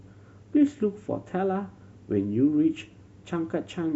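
Nothing stands out as a technical fault anywhere in this short bit of speech, so there's nothing to point to on the timeline.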